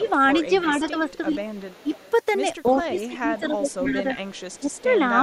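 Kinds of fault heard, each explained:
speech suppressed in double talk: the voice dips by up to about 15 dB while the far side talks, likely an echo canceller ducking both sides; loudness drops, no added copy.
echo leak: a faint delayed copy of the voice trails it by 326 ms, about 20 to 30 dB down, likely uncancelled loudspeaker pickup; unlike suppression, something is added.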